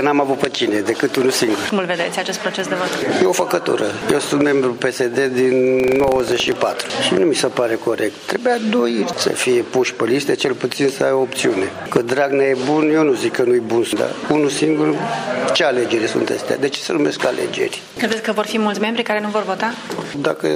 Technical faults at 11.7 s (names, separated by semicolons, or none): none